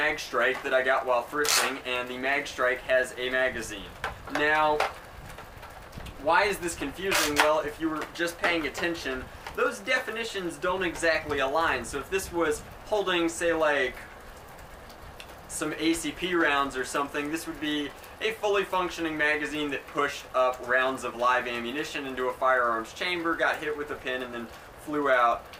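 Nothing here sounds off: the audio runs along steadily the whole way, with no glitches, dropouts or odd noises anywhere in it.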